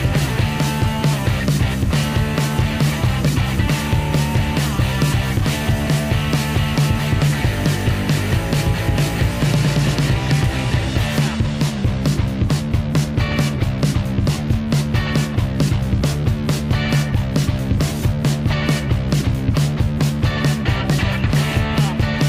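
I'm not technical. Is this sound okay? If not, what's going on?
Yes, nothing faulty can be heard anywhere in this recording.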